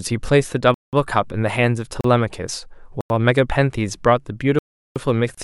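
At 0.74 s the speech cuts to a block of digital silence lasting about 186 ms, ending at 0.93 s. More holes follow at 2.01 s (35 ms), 3.01 s (93 ms), and 4.59 to 4.96 s (372 ms). The sound points to an output buffer that went unfilled. Three of the lengths fit 4096-, 8192- and 16384-sample blocks.

At 5.35 s a gap at a join of encoded pieces opens for about 30 ms. Separately encoded pieces were joined untrimmed, keeping encoder delay and final-frame padding. Its edges are smeared. The speech then resumes where it stopped.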